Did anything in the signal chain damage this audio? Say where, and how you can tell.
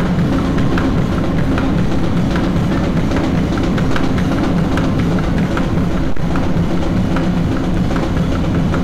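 Yes. Hard clipping runs through the whole clip: the sounds were driven about 12 dB past the limit of a converter or sample-format stage, so roughly one sample in seven is cut flat. The flat tops produce a harsh, buzzy fuzz on every loud sound, unlike the rounded warmth of soft saturation.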